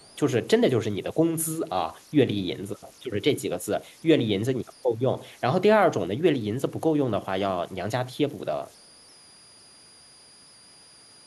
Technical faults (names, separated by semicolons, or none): converter idle tones; echo leak